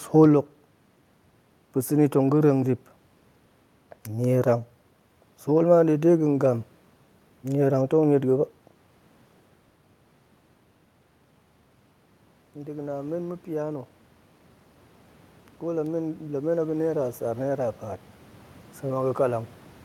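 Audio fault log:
12.54–13.94 s and 15.61–18.11 s, automatic gain rising: the gain control judged the input too quiet and raised it by about 4 dB, then about 5 dB. Voice and room noise swell together, so the waveform envelope widens and the spectrogram's noise floor brightens gradually across each span.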